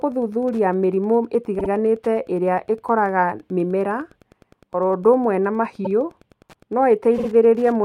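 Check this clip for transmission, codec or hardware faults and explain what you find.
Two faults are present: Wi-Fi interference throughout the speech, and repeated frames at three points.

Wi-Fi interference runs the whole length: a nearby radio's beacon, every 102.4 ms, is rectified by the circuit into steady ticking, about 35 dB below the speech. On a spectrogram it appears as evenly spaced vertical broadband lines.

Repeated frames occur after "gũthuthuria mĩrimũ" at 1.58 to 1.69 s, at 5.84 to 5.89 s, and at 7.17 to 7.28 s. A 52 ms block is replayed twice, once, then twice, adding about 104, 52 and 104 ms. Each is heard as a stutter. The waveform shows identical copied segments.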